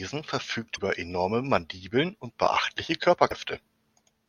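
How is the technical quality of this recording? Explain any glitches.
Two brief glitches from damaged data in a compressed stream spoil the speech. They fall at 0.73 to 0.79 s and at 3.28 to 3.33 s, right after "und beachtliche". Corrupted bytes make the decoder misread frames and hunt for the next valid header, producing a chirp, squawk, click or short hole.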